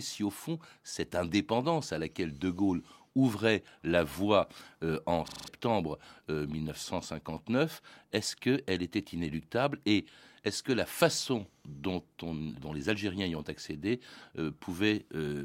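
A system hang loop runs from 5.28 to 5.48 s. The playback side stalled while the audio hardware kept reading the same 40 ms stretch of its ring buffer, so that fragment of speech repeats exactly, five times over. Because the loop recurs at 25 Hz, it comes across as a rapid, machine-like stutter. The speech that should have filled that gap, roughly a fifth of a second, is lost.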